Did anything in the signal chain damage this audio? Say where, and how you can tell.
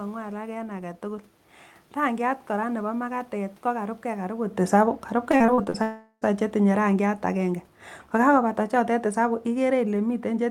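Yes. In call processing, automatic gain falling lowers the level from 4.59 to 7.60 s by about 5 dB, and again from 8.12 s to the end. Both sound and room noise sink together, so it isn't the talker moving, which happens separately around 4.5 s.

On the network, repeated packet loss between 5.31 and 5.76 s leaves six gaps, the longest 40 ms, each patched by stretching the previous sound. About 37% of that span is synthetic fill, so the audio turns choppy and robotic.

From 5.82 to 6.24 s, roughly 0.4 s of audio is gone, likely a long network dropout. A fading buzz or hiss continues the last sound, then brief silence, and the audio resumes with that stretch missing.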